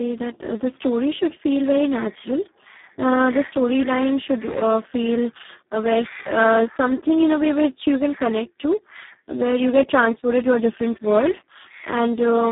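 From start to finish the speech sounds hoarse, buzzy and close to robotic, confined to a narrow telephone band of roughly 150 Hz to 3.7 kHz with nothing above 3.8 kHz. This is heavy Speex codec damage, consistent with a setting near 4 kbps that leaves too few bits for natural excitation.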